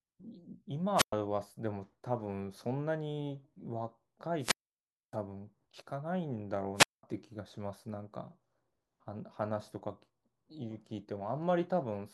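At 0.95, 4.38 and 6.75 s the speech suffers wireless microphone squelch dropout: the radio link fades, hiss rises, then the receiver mutes for about 110, 617 and 203 ms. Waveforms show flat near-silent gaps; spectrograms show a brief broadband noise smear before each blank.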